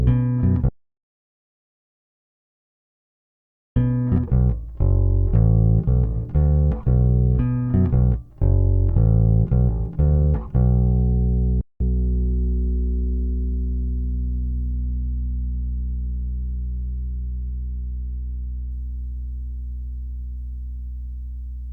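The audio cuts to total silence at 0.69 s and returns at 3.76 s. The gap lasts about 3.1 s, with no room tone at all. This is likely an audio dropout to silence, where the input was lost and silence was written. Whatever sounded then is gone. At 11.61 s the sound stops dead for about 0.19 s, then resumes. That points to a playback stall, likely a starved or blocked player. From 11.80 to 11.98 s the audio rushes at twice normal speed, but at its normal pitch. This is time-compressed catch-up. The player trims and cross-fades small slices to clear its backlog. From 14.73 to 18.71 s the treble goes dull and a gritty noise rises, then clears. This is a Bluetooth SBC bit pool drop. The sound fits the bit pool falling from 28 to 13, around 102 kbps. The top bands starve and the rest turn coarse.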